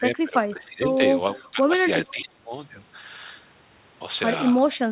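From the start to 1.02 s the speech sinks and breaks up, dropping by about 15 dB over most of that stretch, and it dips again from 1.39 to 1.72 s. This is speech suppressed in double talk. With both ends talking at once, the echo canceller likely couldn't tell this talker from the loudspeaker echo and pulled the whole signal down.

From 2.06 to 2.24 s a faint, delayed copy of the speech comes through, about 25 dB below the talker and trailing by roughly 0.46 s. This is an echo leak. The far side's loudspeaker sound reached its microphone, and the canceller there likely failed to remove all of it, so a scrap was sent back.

Overlapping that, from 2.11 to 2.54 s, the speech is suppressed hard, falling by about 25 dB, again from double-talk suppression. Throughout, nothing is heard above 4 kHz, which fits a G.711 A-law call path at 64 kbps.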